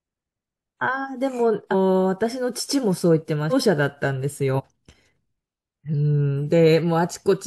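Speech lurches forward at 1.71–1.74 s, 3.50–3.54 s and 4.56–4.61 s. Around a third of a second, about 0.4 s and about a sixth of a second of audio go missing in turn. These are compressed frames skipped. Whole coded blocks about 42.7 ms long were missing or rejected by the decoder, so playback jumps by several frames at once.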